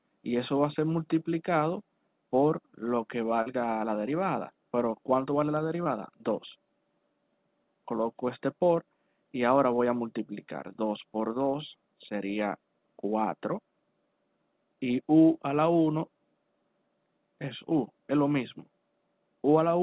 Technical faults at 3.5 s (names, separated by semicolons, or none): short concealed packet loss